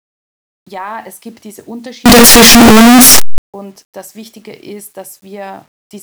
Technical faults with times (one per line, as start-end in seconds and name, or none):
2.06-3.38 signed and unsigned mixed up